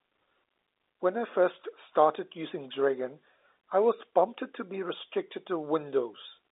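No technical faults are audible.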